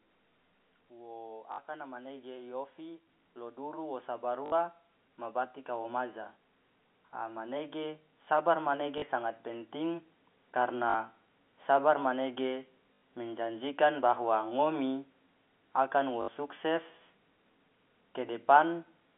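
Speech heard through a narrow telephone-band channel, consistent with G.711 coding, swells in level together with its background from 0.88 to 6.09 s by about 11 dB and again from 7.19 to 10.09 s by about 5 dB. This is automatic gain rising, as the gain control lifts a level it judged too quiet. Short buzzy robotic stutters occur at 1.52 s and 4.46 s (60 ms each), 8.98 s and 10.9 s (40 ms each), 12.95 s (80 ms) and 16.22 s (60 ms). This is packet loss with the last packet repeated, where the receiver replays the previous packet until new audio arrives, and the timing fits 20 ms packets.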